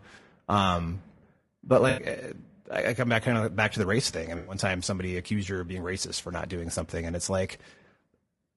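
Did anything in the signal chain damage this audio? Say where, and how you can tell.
Yes. Throughout, the speech sounds rough and grainy, with noise filling the gaps between harmonics and a thin, synthetic top end. That points to the codec stage, likely low-delay AAC compression (AAC-ELD), whose short frames resolve pitch poorly, here at a bitrate that sounds around 32 kbps.

At 1.89 to 2.03 s and again at 4.37 to 4.55 s, the sound smears into a brief noisy, phasey patch of about 80 ms and 100 ms. This is AAC frame loss with concealment in the network stage: the decoder rebuilt the missing frames from the last good spectrum.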